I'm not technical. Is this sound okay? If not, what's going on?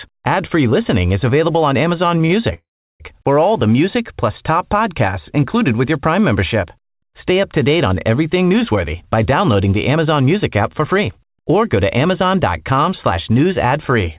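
No. At 2.18 s and again from 2.26 to 2.32 s, the speech briefly hangs on one sound for a split second before carrying on. These are short stalls from a late packet: a piece of audio arrived late, so the call app stretched the last sound until it came, and nothing was lost.

From 2.54 to 3.02 s, the speech stops for about half a second, going mostly silent, then resumes exactly where it left off. This call audio freeze was likely caused by audio held up on its way, with the app waiting rather than skipping ahead.

From 8.71 to 13.95 s, the speech runs about 6% faster than normal while keeping the same pitch, so it can sound slightly hurried. This is a jitter buffer speed-up: after the earlier delays, the app trimmed tiny slivers of speech many times in a row, removing roughly a third of a second in total, to catch back up.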